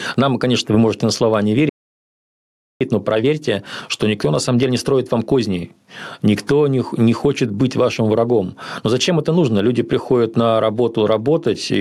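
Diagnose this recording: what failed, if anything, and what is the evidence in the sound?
Gain pumping runs through the whole recording, at the input stage. The gain ducks by around 10 dB under each louder syllable. This is likely input gain set far too high, with a fast limiter clamping each peak, so loud and quiet passages are squashed together.

A playback stall hits the speech at 1.69 s, just after "можете на слова не", and leaves about 1.1 s of silence until 2.81 s. At the playback buffer stage, the player likely ran out of data or its thread was blocked, so output stopped mid-phrase before resuming.

Time-compressed catch-up follows from 2.81 s to 5.81 s, again at playback. The speech runs about 1.1 times fast with its pitch unchanged. The player is clearing the backlog from the stall by cutting out short slices and cross-fading the joins.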